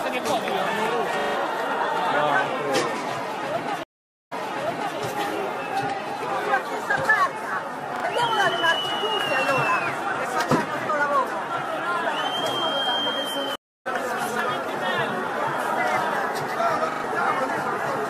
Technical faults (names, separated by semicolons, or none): repeated buffer; stream reconnect